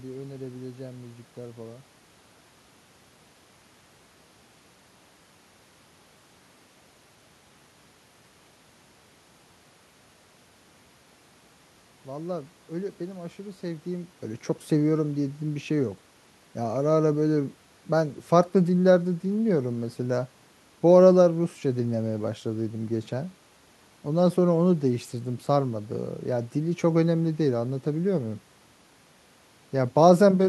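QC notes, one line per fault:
Nothing stood out on listening to the speech recording.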